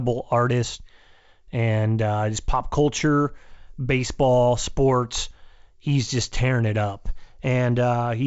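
No technical faults can be heard in the speech. It has passed through G.722 wideband telephone coding, with nothing above about 7.7 kHz and at most a faint trace of coding in the upper band, which fits the full 64 kbit/s mode.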